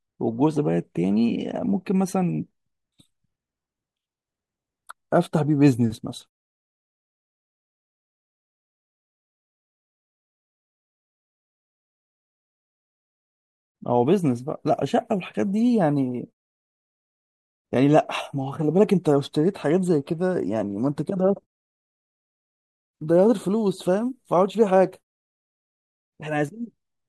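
No technical faults are audible anywhere in this speech recording, and the background dropping to silence between phrases before coming back with the next sound is normal behaviour rather than a defect.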